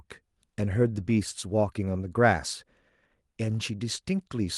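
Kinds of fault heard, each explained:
Nothing stood out on listening to this speech recording.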